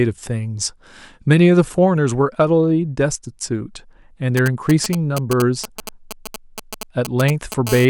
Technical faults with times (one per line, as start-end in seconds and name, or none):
4.37-7.69 GSM signalling bursts
7.69-7.85 GSM phone buzz